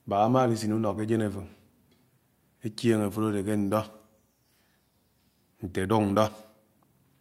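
No technical faults are audible.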